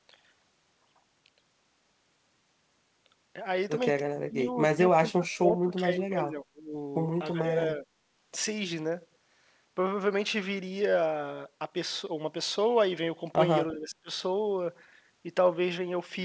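Between 4.26 and 4.47 s the speech drops sharply, by about 25 dB, then dips again from 4.71 to 4.80 s and through a longer stretch from 4.98 to 6.73 s, most of it held down, by up to about 20 dB. Shorter, shallower dips follow at 7.33 to 7.39 s and 7.76 to 7.86 s, and a deep one returns at 13.73 to 14.10 s. This is speech suppressed in double talk. Likely cause: the echo canceller could not separate the talker from loudspeaker echo and attenuated both. The talker's level pumps and breaks up; the G.722 call path band-limits the audio, with nothing above 8 kHz.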